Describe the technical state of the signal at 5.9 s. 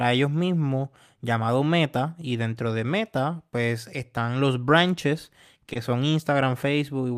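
A late packet emptied the jitter buffer just after "pues están los branches", causing a short stall from 5.73 to 5.90 s: the last sound is held about 20 ms, nothing lost.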